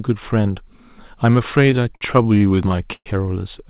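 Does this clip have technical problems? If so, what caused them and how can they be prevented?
Yes. Between 1.66 and 3.08 s, audio packets kept arriving late or more slowly than the receiver was playing them, so its jitter buffer ran dry 14 times. Each time it stretched the last sound to cover the wait, fading it on the longer holds, the longest about 117 ms. This causes repeated stalls (stutter): roughly a fifth of that span, about 315 ms, is filled-in sound, so the speech drags and hiccups even though nothing is actually lost. The narrow band, with nothing above 4 kHz, is simply the G.711 telephone codec. Prevention: give the call a steadier network path or let the jitter buffer grow its target delay sooner when arrival times start to slip.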